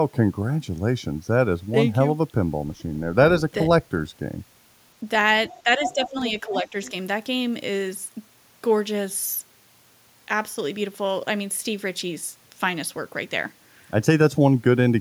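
From 5.47 to 5.62 s there is other side's voice leaking through: a second voice around 25 dB below the speech, likely loudspeaker echo the canceller missed. On a spectrogram it appears as a separate set of weak harmonic lines.

From 5.64 to 6.16 s comes speech suppressed in double talk. The talker dips by up to around 10 dB over roughly 0.4 s in total, likely the canceller turning down both voices during overlap. The waveform envelope pinches inward there.

Overlapping that span, from 5.83 to 6.28 s, the leaking voice returns much stronger, only about 5 dB under the speech. Its harmonics cross the talker's on the spectrogram.

From 6.41 to 6.74 s the suppression recurs, again up to around 10 dB, affecting roughly 0.2 s.

A brief leak at 6.85 to 6.89 s sits about 25 dB down.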